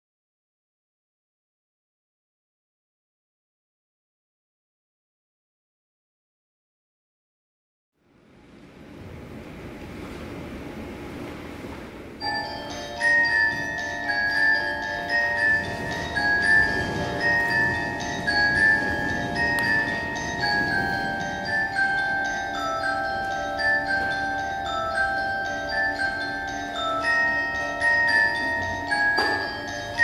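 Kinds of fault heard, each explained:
No technical fault can be heard in the audio. There is nothing to list under any kind.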